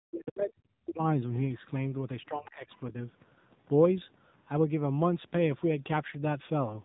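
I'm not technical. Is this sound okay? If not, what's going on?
No. The whole clip went through the AMR narrowband mobile codec, the kind used on older phone networks. Nothing above about 3.8 kHz survives. So the voice sounds muffled and boxy. It also has a buzzy, artificial edge throughout.

There is also speech suppressed in double talk. From 0.05 to 1.02 s the voice drops away almost completely. From 2.28 to 2.69 s it dips again, but less. Both sides were likely talking at once, and the phone's echo control turned this voice down.

Last, there is the other side's voice leaking through. Short, faint scraps of a second voice appear at 2.46 to 2.50 s and 2.70 to 2.78 s. They are quiet and brief. The likely cause is the other caller's sound coming from a loudspeaker and reaching the microphone.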